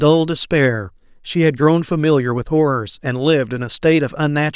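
No technical faults can be heard in this recording.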